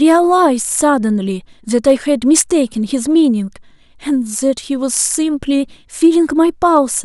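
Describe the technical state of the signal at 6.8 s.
Hard clipping hits from 6.76 to 6.78 s. Speech peaks overrun the stage by about 1 dB and are cut flat. This produces a brief crackle.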